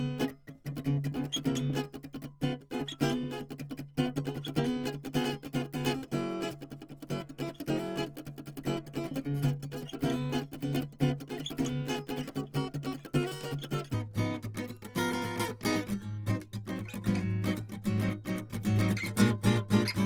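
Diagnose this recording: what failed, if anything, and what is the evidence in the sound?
From 0 to 13.93 s the music plays 1.35 times fast, about five semitones high. This is a section at the wrong speed, likely a playback clock mismatch.

Throughout, tones sound rough and grainy while the bandwidth stays fullband. This is likely Opus compression in CELT mode, consistent with roughly 24 kbps.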